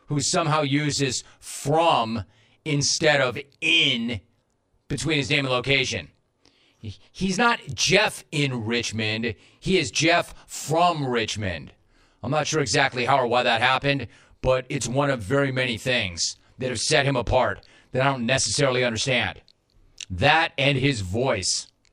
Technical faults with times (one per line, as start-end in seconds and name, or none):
0.00-21.92 channel delay (comb filtering)